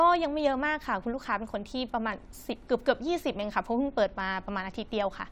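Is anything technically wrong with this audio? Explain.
No, nothing in this speech recording points to a technical fault. There are no dropouts, distortion or glitches anywhere in it.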